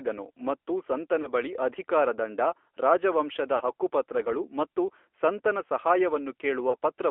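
Speech carried over an AMR narrowband mobile codec is rebuilt from a vocal-tract model at 8 kHz sampling. The result is confined to roughly 300 Hz to 3.4 kHz and has a plainly audible buzzy, synthetic edge, which fits a mid-rate mode around 10.2 kbps. Lost AMR speech frames, where radio errors forced the decoder to repeat its last good settings at falling gain, cause brief warbling dips at 1.22 to 1.30 s, 5.10 s and 6.70 to 6.74 s, each consistent with a single 20 ms frame. A longer smear at 3.56 to 3.73 s points to two consecutive lost frames.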